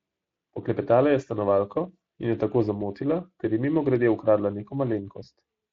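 A speech recording with Speex codec damage plainly audible throughout. The CELP coding was done at a bitrate near 20 kbps.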